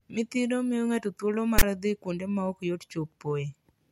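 A speech clip with one burst of file tags played as audio, from 1.59 to 1.63 s, between "miyo ng'ato thuolo" and "dhi kuonde ma ok". For about 40 ms, a block of text metadata is read as if it were samples, giving a loud, lopsided rasp that then drops into silence where zero padding follows. The hard-edged static, offset to one side, is what sets it apart from an ordinary dropout, which would simply go quiet.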